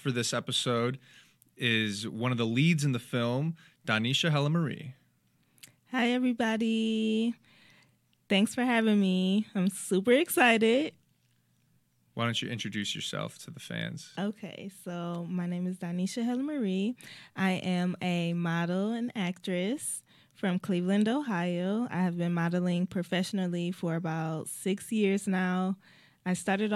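No technical faults are audible.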